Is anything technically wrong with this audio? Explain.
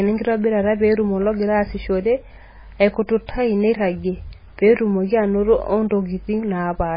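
Yes. Throughout, the speech carries what is likely heavy MP3 compression, fitting a bitrate near 16 kbps. Nothing remains above 5 kHz, and weak frequency lines flicker on and off between frames, so it sounds watery and swirly with smeared attacks, unlike a simple low-pass filter's clean dullness.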